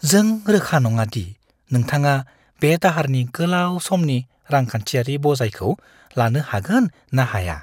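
A speech recording, and nothing is technically wrong with it.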